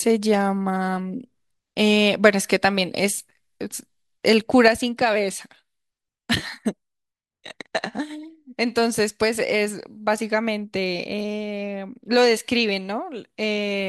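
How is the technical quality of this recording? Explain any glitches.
The recording has one clear fault. From 4.68 s to the end, the speech abruptly drops by about 6 dB and stays there, likely because one stereo channel dropped out, halving the shared signal in the mono sum. Unlike a fade or gain ride, the step is instant, and the sound is otherwise unchanged.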